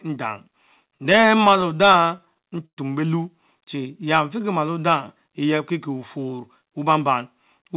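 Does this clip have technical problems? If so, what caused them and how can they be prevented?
Yes. From 0.88 to 2.79 s the speech stutters and drags: 22 short stalls, the longest 113 ms, are bridged by stretching the last sound, about 330 ms in all and 17% of that stretch. These are repeated stalls (stutter), caused by packets arriving late so the jitter buffer kept running dry. A steadier network path or a larger jitter buffer target would prevent this.

Between 3.61 and 4.05 s the speech slows to 93% speed at unchanged pitch, with drawn-out sounds. This jitter buffer slow-down came from the receiver repeating pitch periods, adding 36 ms to rebuild a depleted reserve. Keeping packet delivery steady avoids these refills.

From 6.18 to 7.09 s the speech hurries, running at 107% speed with pitch intact. This is a jitter buffer speed-up: the receiver cut out roughly 70 ms in small pitch-period pieces to shed excess delay. 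Reducing packet bunching, for example through smoother network queuing, prevents it.

The band limit at 4 kHz throughout fits the narrowband G.711 codec on this call path.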